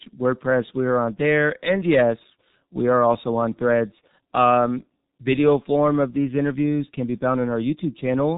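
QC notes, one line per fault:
Throughout: G.723.1 codec. Nothing above 3.8 kHz and heavy low-rate coding leave speech muffled and hoarse with smeared consonants, consistent with about 6.3 kbit/s.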